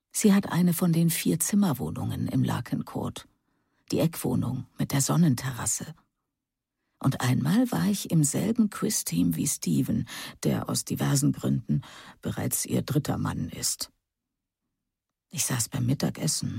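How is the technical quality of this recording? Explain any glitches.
No glitches turn up anywhere in this recording. Nothing in the sound points to a fault in how it was captured or passed along.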